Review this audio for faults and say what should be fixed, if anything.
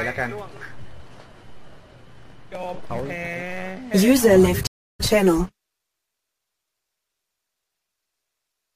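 A stream reconnect occurs at 4.67 s: the connection drops, leaving 325 ms of silence until 5.01 s, when a fresh decoder starts mid-stream and the sound resumes roughly a fifth of a second further on. Larger client buffering and faster reconnection would prevent it.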